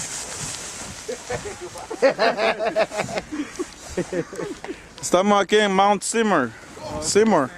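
A call bitrate drop runs from 2.17 s to 4.09 s. The call's bandwidth estimate fell, so the Opus encoder was given far fewer bits and coded the audio more coarsely, and at a rate this low it also trims the high frequencies. The sound turns rough, watery or muffled, which fits a fall from about 48 kbps to about 18 kbps, held at the bottom for roughly 1.85 s. The bitrate recovers and the sound clears again at 4.09 s.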